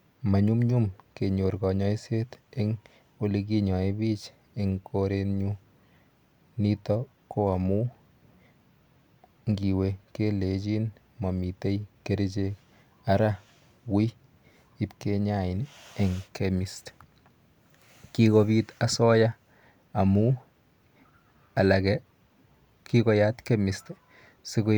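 Nothing stood out on listening to this speech recording.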